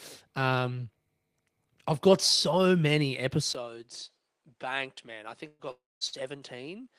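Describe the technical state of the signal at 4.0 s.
At 4.0 s the speech sounds duller and quieter than before, with a faint new background hiss. This began at 3.53 s, right after a brief 20 ms gap, and lasts to the end at 6.99 s. Nothing reaches above 10.5 kHz, and the level sits roughly 10 dB lower. The likely cause is an input switched to a poorer device mid-recording, whose narrower bandwidth, own gain and own noise floor replaced the original microphone's.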